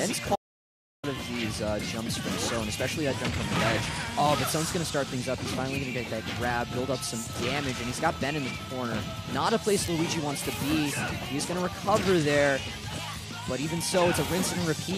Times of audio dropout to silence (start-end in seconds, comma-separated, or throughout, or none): 0.36-1.03